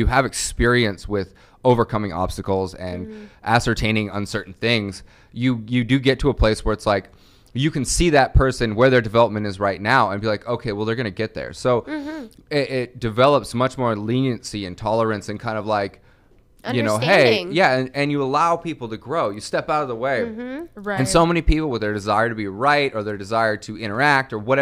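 No technical faults can be heard anywhere in the clip.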